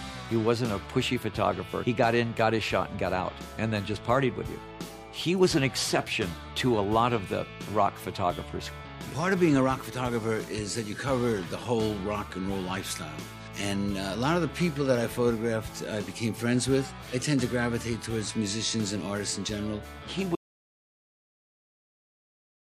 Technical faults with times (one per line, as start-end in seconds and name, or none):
20.35-22.79 audio dropout to silence